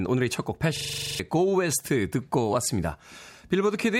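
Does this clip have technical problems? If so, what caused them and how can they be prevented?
Yes. A system hang loop runs from 0.77 to 1.2 s. A 42.7 ms slice of speech repeats ten times, a rapid stutter at 23.4 Hz. The driver froze while the hardware kept replaying its ring buffer, which fits a 2048-sample buffer, and roughly 0.4 s of speech is lost. Prevent it with stable drivers, a high-priority audio thread, and a watchdog that mutes output when the buffer stops being refilled.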